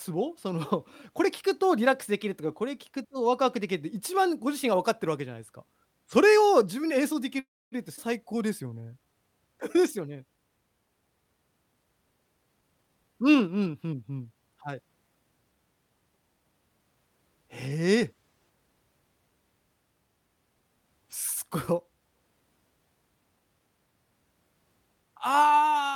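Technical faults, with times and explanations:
7.39–7.75 s, call audio freeze: sound stops, a brief fading fill gives way to about 260 ms of silence, then resumes intact, likely a jitter-buffer underrun from delayed packets.
7.96–8.00 s, skip ahead: playback jumps forward, dropping about a tenth of a second of audio and splicing the two sides together almost directly.
8.26–9.13 s, jitter buffer slow-down: repeated pitch periods add 91 ms, so the speech runs at 90% speed with unchanged pitch and drawn-out sounds.
12.57–14.35 s, jitter buffer speed-up: short pitch-period pieces removed, about 0.3 s in total, make the speech run at 117% speed, hurried but at the same pitch.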